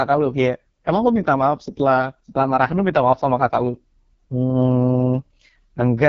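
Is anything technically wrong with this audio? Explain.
Yes. AMR wideband (HD Voice) codec, throughout: a pulse-driven vocal tract model rebuilds the speech, leaving it rough and raspy, with nothing above 7.4 kHz, which fits AMR-WB's lowest rate, 6.6 kbit/s.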